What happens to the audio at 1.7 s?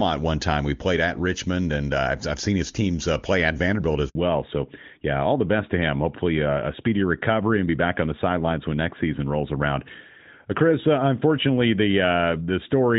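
Nothing goes wrong at 1.7 s; the speech carries on intact through that moment, with the AMR wideband (HD Voice) coding at its top rate leaving no audible mark there.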